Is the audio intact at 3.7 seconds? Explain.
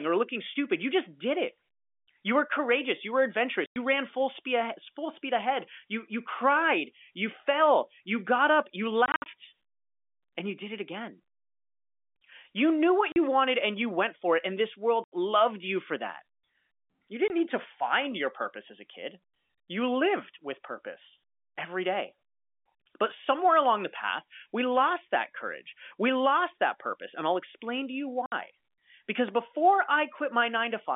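No. Packet loss filled with silence cuts a 100 ms hole from 3.66 to 3.76 s, just before "ran full speed ahead". Its edges are hard, and the gap fits five 20 ms packets.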